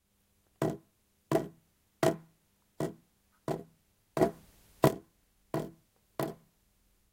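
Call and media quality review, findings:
Sudden gain jump, 4.21 to 4.88 s: sound and noise floor step up together by about 10 dB, then step back down. Likely a digital gain stage applying a new setting from one sample to the next without a ramp.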